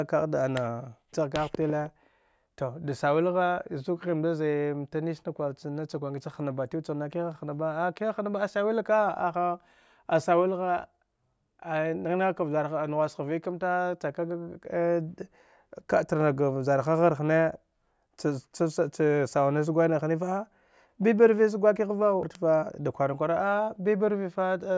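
Speech recording with no audible technical faults.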